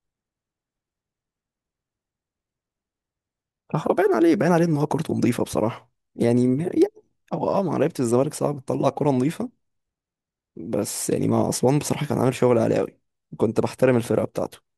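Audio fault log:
No faults found in the speech.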